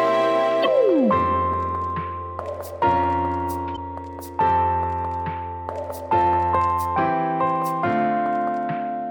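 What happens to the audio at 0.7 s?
Just before that point, from 0.62 to 0.67 s, there is a short burst of damaged data in a compressed stream. A stretch of the encoded bitstream is corrupt, so the decoder misreads those frames, loses synchronisation and has to hunt for the next valid frame header before normal decoding resumes. The result is a brief squawk or blip lasting about 55 ms, ending just before 0.7 s.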